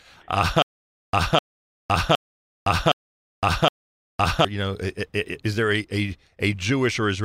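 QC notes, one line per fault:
0.62–4.45 s, stutter with silent gaps: a 0.25 s fragment of speech repeats five times, each followed by 0.51 s of dead silence, a 0.77 s cycle. The likely cause is a stalled stream replaying its last buffer. The waveform shows identical blocks separated by flat silent gaps.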